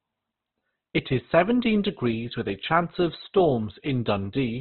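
From start to finish the speech is band-limited, with nothing above about 4.2 kHz, and heavily degraded, most likely by Opus compression at a very low bitrate, around 12 kbps. Instead of the watery swirl and dropouts of MP3, the tones turn rough and grainy, with noisy fill where detail was lost, because the encoder keeps each band's energy and patches it rather than leaving holes. The narrow bandwidth gives a muffled, phone-like quality.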